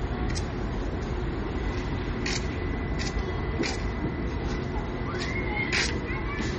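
From start to finish the audio has nothing above 8.2 kHz, a hard ceiling that leaves the top end dull and closed-in. Plainly audible coding damage runs through the whole clip as a watery, swirling texture. This is likely MP3 compression at a low bitrate, which fits about 32 kbps. With so few bits, the encoder cuts the treble at a fixed frequency and drops weak frequency lines that flicker in and out from frame to frame.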